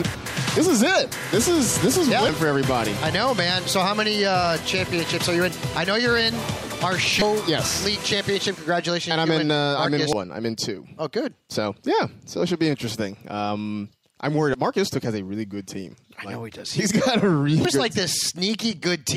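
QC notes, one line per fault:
2.29 s, 7.18 to 7.22 s, 10.13 s, 14.51 to 14.55 s and 17.65 s: damaged data in a compressed stream. Five brief chirps or blips, the two longer ones lasting about 36 ms. Corrupted bytes make the decoder misread those frames and lose sync until it finds the next frame header.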